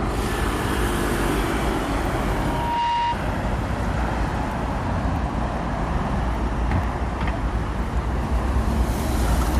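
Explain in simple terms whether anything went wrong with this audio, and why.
From 2.30 to 3.17 s there's loudspeaker feedback squeal: a steady tone near 944 Hz swells up over about half a second until it's as loud as everything else. A microphone was catching its own speaker, and that one pitch kept feeding itself.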